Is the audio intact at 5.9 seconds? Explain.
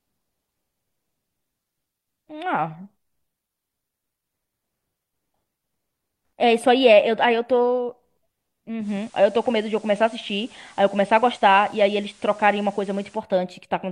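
Yes, the speech at 5.9 seconds is intact, with no dropout, click, distortion or other fault at that point.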